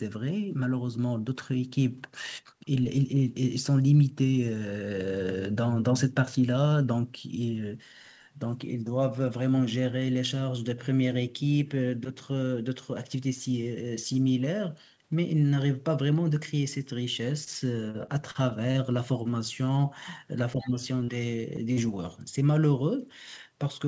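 At 17.44 to 17.50 s there is a short stall from a late packet. The jitter buffer ran dry, and the receiver held the current sound for about 26 ms until the packet turned up, then resumed from the same point. Nothing is lost, which sets it apart from a dropout. The sound simply drags briefly, with a faint buzzy sustain, and the timing shifts slightly later afterward.

From 17.91 to 18.78 s comes repeated packet loss, heard as robotic sound. Five gaps, the longest about 37 ms, are each bridged by extending the previous sound, so roughly a seventh of the stretch is synthetic. The gaps arrive in quick succession rather than as one isolated hiccup, so the speech turns choppy and robotic, and about 40 ms of real audio never returns.

Between 20.55 and 20.75 s the talker's speech is suppressed in double talk. For about 200 ms the level falls, at its deepest by about 15 dB. The likely cause is that the echo canceller clamped down because both sides were talking at once. 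Unlike packet loss, there is no smeared fill, only a clear ducking of the speech.

Inside that dip, from 20.60 to 20.67 s, the other side's voice leaks through. It is a faint scrap, roughly 25 dB below the talker, and likely loudspeaker echo that the canceller failed to remove. It sounds like a separate second voice in the background, not a distortion of the talker.

Short concealed packet loss occurs at 21.04 to 21.11 s and again at 21.73 to 21.80 s. Each time, about 40 ms went missing and was patched by continuing the preceding sound before blending back in. Because each is a single isolated gap, the result is a brief smear or wobble rather than a sustained robotic stretch. Across the whole clip the audio is band-limited at 8 kHz, which is consistent with a G.722 call path.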